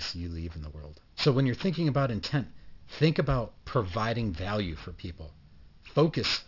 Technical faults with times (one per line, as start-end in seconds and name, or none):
0.00-6.48 aliasing